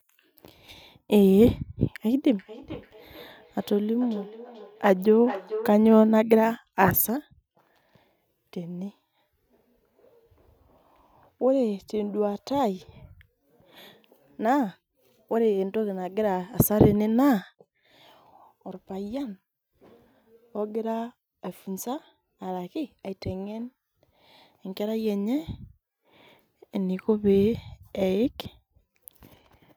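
From 2.21 s to 5.89 s, each stretch of speech comes back as a thin, ringing copy of itself about 400 ms later, peaking at about 14 dB below the direct speech. This is feedback echo between two devices: a second device in the same room on the same call plays this microphone's signal aloud, the microphone picks it up again, and the local echo canceller leaves it alone because it only removes sound from its own speaker.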